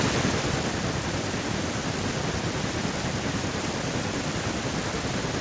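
Automatic gain falling, from 0.05 to 1.01 s: the gain control judges the input too loud or its background noise too strong and eases its gain down by about 5 dB over that second, so the voice and its background sink together. The call path's G.722 coding leaves nothing above 8 kHz.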